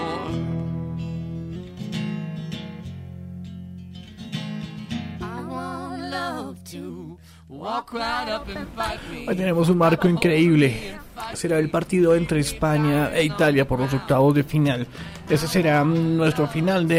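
From 1.56 to 6.9 s there's a wrong sample rate fault: audio captured at 44.1 kHz gets played back at 48 kHz with no conversion, so everything runs about 1.09 times fast and sits roughly 1.5 semitones sharp, sounding rushed and slightly chipmunky.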